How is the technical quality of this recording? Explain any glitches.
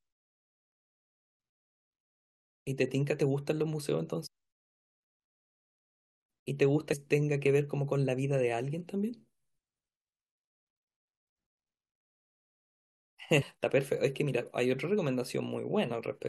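The recording has three short glitches from damaged data in a compressed stream. They occur at 4.25 to 4.27 s, at 6.92 s, and at 13.41 to 13.43 s. Each lasts about 20 ms. At these points part of the compressed data was corrupted. The decoder could not read those frames correctly and lost sync until it found a valid frame header. Each one sounds like a brief chirp or blip cutting into the speech.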